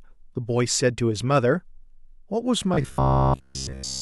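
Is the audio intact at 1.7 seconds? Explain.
Yes, the audio is intact at 1.7 seconds, with no fault audible at that moment.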